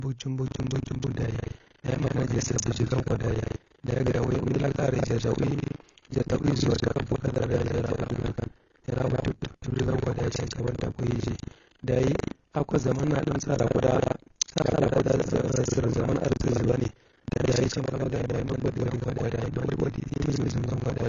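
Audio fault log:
Throughout: AAC compression, likely. Nothing is heard above 7 kHz. Sibilants sound dull and smeared, which fits a bitrate near 24 kbps.
0.44 to 21.09 s: buffer tearing. A rattling 25 Hz buzz rides the speech. About two-fifths of each 40 ms buffer replays audio roughly 150 ms old.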